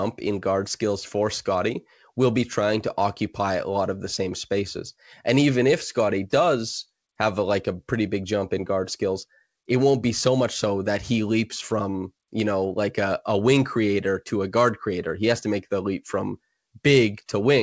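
No technical faults can be heard anywhere in this recording.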